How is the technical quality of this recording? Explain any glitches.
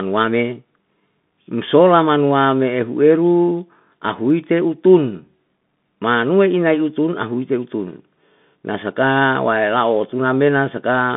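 The recording has narrowband headset quality throughout, with one brief glitch.

The whole clip carries Bluetooth CVSD headset codec damage, and it is plainly audible. The audio sits in a band of roughly 150 Hz to 3.6 kHz. Nothing above that comes through. CVSD sends one bit per step, saying only up or down, with an adaptive step size. That fits a 64 kbps headset link. Fast, bright sounds outrun the step and distort. S sounds turn scratchy. A fine, grainy hiss sits underneath.

At 4.30 s there is a single sharp click. It is likely caused by dropped samples, a couple of them, far less than a millisecond. The waveform jumps straight from one value to a later one. The gap is too short to remove any sound. What you hear is the sudden step itself, a brief tick.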